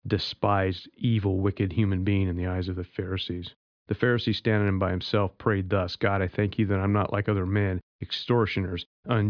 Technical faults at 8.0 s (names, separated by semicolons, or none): none